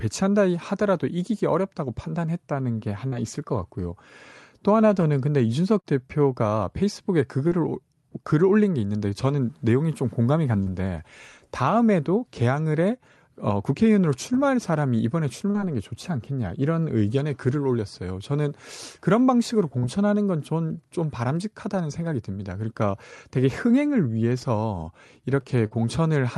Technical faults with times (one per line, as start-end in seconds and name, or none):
3.07-3.15 short concealed packet loss
5.80-5.87 short concealed packet loss
7.48-7.54 short concealed packet loss
10.63-10.69 short concealed packet loss
15.50-15.57 short concealed packet loss
19.78-19.85 short concealed packet loss
25.66-25.74 burst of packet loss